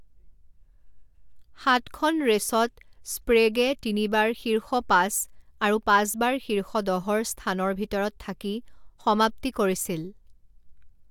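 No technical faults occur at any point in the recording, so there is nothing to describe in time order.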